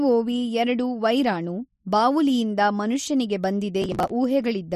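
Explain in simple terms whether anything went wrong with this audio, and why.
Something did go wrong near the end. From 3.82 to 4.11 s, right after "ಎರಡು ವೈರಾಣು ಬಾವುಲಿಯಿಂದ ಮನುಷ್ಯನಿಗೆ", the speech is torn by a gritty burst of processor overload crackle. The computer fell behind and skipped dozens of tiny slices of audio in a row, each gap leaving a hard click, which fits buffers of about 10 ms. Unlike a single dropout, it is a rapid chain of clicks that stops once the load eases.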